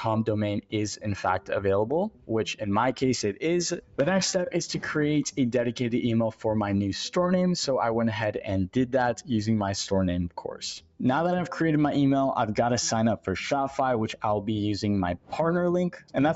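Throughout the clip, a noise suppressor left on for music or other sounds treats sustained material as noise. Held parts and tails sink by about 5 dB while onsets pass, so the level pumps and thins. Unlike a gate, it never closes completely.

At 2.1 to 2.31 s, 3.79 to 3.98 s, 10.8 to 11.0 s, 15.17 to 15.32 s and 15.98 to 16.15 s, the noise suppressor cuts the sound more deeply, by up to about 12 dB, for 150 to 200 ms each time. These are brief dips that clip decays, not dropouts, since the sound stays audible. The call path's band limit, with nothing above 8 kHz, sits under all of this.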